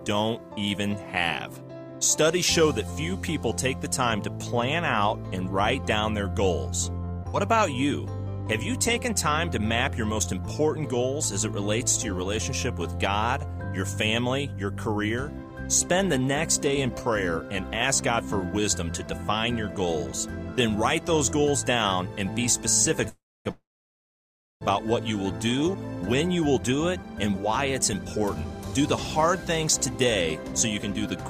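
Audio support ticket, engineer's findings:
Repeated packet loss (robotic sound), 7.05–7.35 s. Choppy, metallic stretch. Four short holes, longest 46 ms, patched by stretching prior sound. About 90 ms concealed, 20 ms lost outright. Roughly 30% of span synthetic. Network path, receiver concealment.

Call audio freeze, 23.09–23.47 s and 23.51–24.63 s. Last sound continued, fades to silence: 270 ms, then 990 ms silent. Gaps of 361 ms and 1.1 s inserted. Nothing lost afterwards. Likely packets delayed in transit, jitter buffer emptied.

Jitter buffer speed-up, 26.63 s to end. Playback hurried, about 108% speed, pitch unchanged. Receiver dropping pitch-period slices repeatedly to shed excess buffered delay. Roughly 0.4 s of audio removed in total. Jitter buffer time-scaling.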